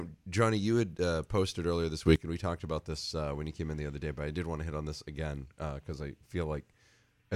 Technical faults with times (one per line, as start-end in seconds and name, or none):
2.06-2.16 sudden gain jump